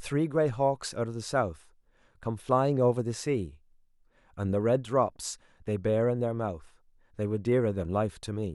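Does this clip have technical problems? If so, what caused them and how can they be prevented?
No technical faults are audible.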